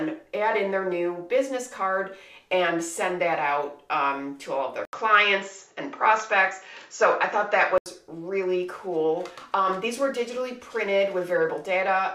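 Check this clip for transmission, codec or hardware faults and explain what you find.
One fault is present, from 4.85 s to 7.86 s. There, the input likely switched to a poorer device. A short gap of about 80 ms marks the change, and then the sound turns duller, with nothing above 7.6 kHz. The level shifts by a few decibels, and a different background noise appears, roughly 45 dB below the signal. A codec bandwidth drop would only remove the top end. The new noise floor, the level jump and the gap point instead to a different microphone path.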